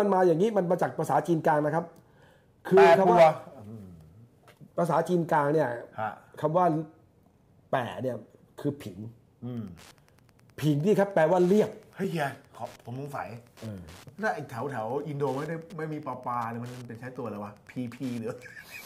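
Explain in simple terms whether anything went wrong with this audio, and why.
Two things went wrong. From 9.47 s to the end there's Wi-Fi interference: a nearby radio leaks into the circuit, giving a faint tick every 102.4 ms, about ten a second. At 12.04 s there's a block of digital silence: the audio drops out for about 3 ms, likely because the software didn't deliver the next chunk in time, so it's heard as a tick or dip.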